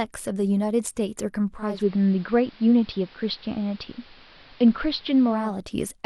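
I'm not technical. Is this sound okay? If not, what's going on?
No. From 1.52 s to 5.59 s there is digital radio blending to analogue: the radio lost its digital signal and faded over a third of a second to the AM broadcast. The sound turns dull and gains a faint hiss.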